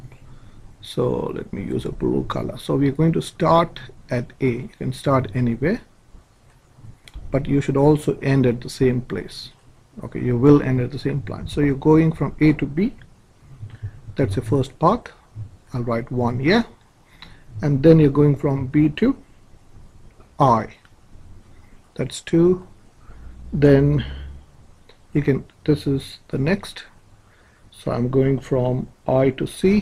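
No technical faults can be heard anywhere in this audio. Nothing stands out at any point that would need a time or an explanation.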